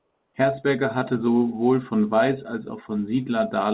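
From 0 to 0.34 s the background is comfort noise in place of the real one: a steady, featureless hiss about 3 dB quieter, lacking the room's detail. The cause is likely discontinuous transmission, with the receiver synthesising noise until speech begins.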